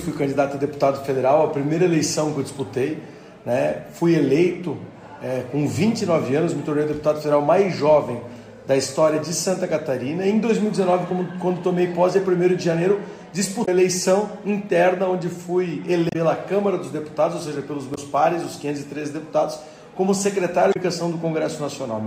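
Damaged data in a compressed stream corrupts four short stretches, so the decoder misreads those frames, loses sync and hunts for the next header. Each is heard as a brief chirp or blip of about 64 ms, at 13.62, 16.09, 17.92 and 20.70 s.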